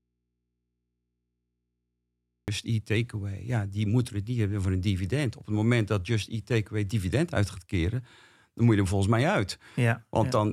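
From the very start until 2.48 s the speech is missing and only a low mains hum remains, roughly 55 dB below normal level. This audio dropout to a faint residue likely comes from the signal being lost upstream while the open input stayed live.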